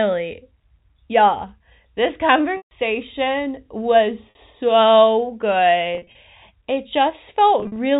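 At 2.57 to 2.71 s, 4.30 to 4.35 s, 5.95 to 6.15 s and 7.60 to 7.77 s the telephone-band speech shows packet loss with pitch repetition. The receiver fills missing audio by repeating the last pitch period. The 140 ms gap fades into silence. The 50 ms gap is a brief buzzy hold. The last two are scattered runs of up to 40 and 50 ms, giving choppy buzzing. Unlike plain dropouts, each gap begins as a held tone, not a sudden cut to silence or a click.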